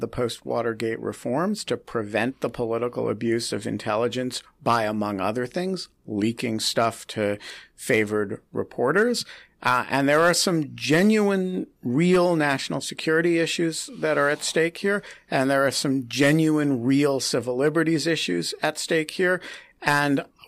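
Nothing goes wrong anywhere in this bit of speech, so there's no technical fault to point out.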